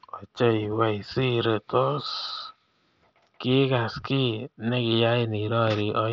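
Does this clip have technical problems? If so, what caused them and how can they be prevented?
Yes. At 4.01 s there is concealed Bluetooth headset packet loss. A single packet, about 7.5 ms of speech, went missing between headset and phone. The receiver patched the gap by repeating a matching stretch of recent waveform, so it is nearly inaudible. The wideband mSBC link adds only light graininess. Keep the headset close to the phone and away from Wi-Fi congestion to prevent dropouts.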